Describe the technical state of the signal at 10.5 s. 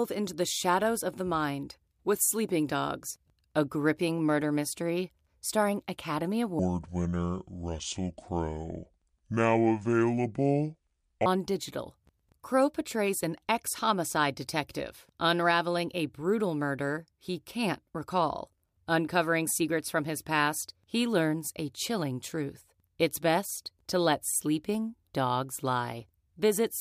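At 10.5 s the speech sits inside a section at the wrong speed, from 6.59 to 11.26 s, running at 0.622 times normal, likely from the wrong clock rate. Unlike a pure pitch shift, timing slows too, dropping everything about seven semitones.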